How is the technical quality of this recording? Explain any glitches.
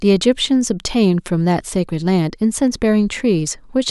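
The recording has no technical faults to report. There are no glitches in it to explain.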